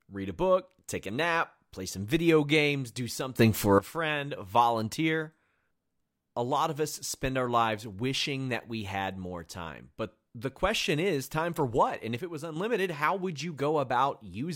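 A digital gain setting was likely switched with no ramp, so the level changes between one sample and the next; this sudden gain jump occurs twice in the speech. From 3.39 to 3.79 s, after "some video games do", the sound and its background noise leap up by about 14 dB together. From 12.19 to 12.56 s, before "how would you", both drop by about 6 dB at once.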